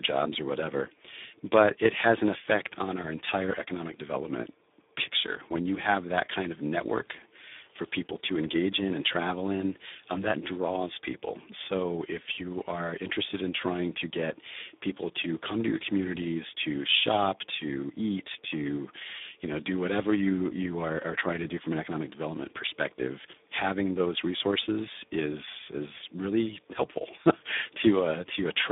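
For the whole clip the speech has passed through the Speex codec at a low setting, which fits a rate of around 8 kbps. At that rate the encoder has very few bits to describe the excitation, so the speech comes out hoarse, noisy and edged toward robotic, with heavy codec damage throughout. The channel is also narrowband: the sound sits roughly between 200 Hz and 3.6 kHz, with nothing at all above 3.7 kHz, giving a thin telephone-like quality.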